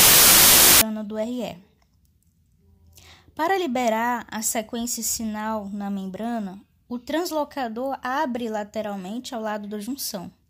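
From the start to about 0.81 s the speech is swamped by loud, harsh noise, with the talker only faintly audible underneath, running fast and high at about 1.33 times normal speed. This is a wrong sample width fault: audio stored as packed 24-bit integers is being read as 32-bit integers. Each value is assembled from bytes of neighbouring samples, so only a fraction still carry the signal's top bits, and four stored samples become three read samples, which explains the speed-up.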